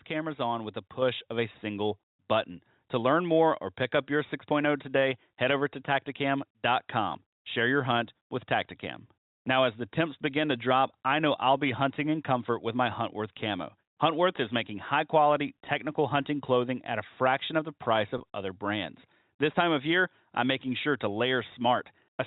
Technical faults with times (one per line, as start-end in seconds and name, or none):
1.02 microphone volume stepped up
18.18-18.20 packet loss with pitch repetition